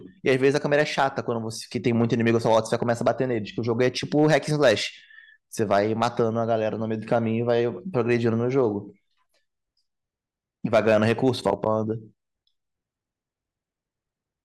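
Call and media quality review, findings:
Hard clipping, 0.28–1.06 s (about 4 dB over), 1.87–3.11 s (about 6 dB), 3.81–4.73 s (about 6 dB), 5.71–6.20 s (about 5 dB), 7.12–7.51 s (about 3 dB), 7.98–8.15 s (about 2 dB), 8.59 s (about 1 dB), 10.73–11.68 s (about 6 dB). Speech peaks flattened at a gain or converter stage; brief crackle at 8.59 s. Flat tops add high harmonics.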